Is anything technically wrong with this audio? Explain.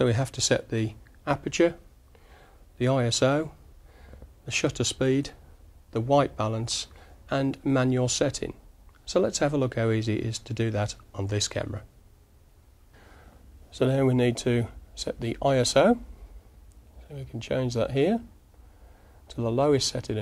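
No, nothing here sounds technically wrong; the audio comes through steady and intact with no problems worth pointing out.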